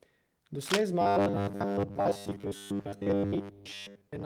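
From 0.61 to 0.82 s a harsh scratching rustle rides over the speech at about its own level, likely cable scratch noise from a worn connector being moved.

From 1.02 s to the end, the speech turns into a rigid, metallic buzz fixed at 100 Hz. This is likely robotic sound from repeated short buffers, with most of the audio replaced by repeats of roughly 10 ms slices.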